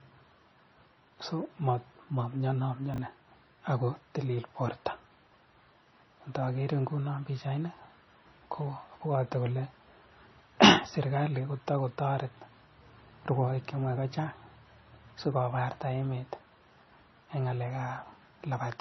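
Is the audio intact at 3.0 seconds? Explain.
No, just before that point there are chunks out of order, from 2.94 to 2.98 s. A 20 ms chunk of speech arrives one chunk late and plays after the chunk that should follow it. Nothing is lost, but the swapped order leaves three hard joins, heard as a brief jumbled flutter.

Across the whole clip, including 3.0 s, the sound is dull, with nothing above 5.9 kHz and mixed smearing and warbly artefacts. This is likely transcoding between lossy codecs, which fits a low-rate MP3 re-encoded as AAC-LC.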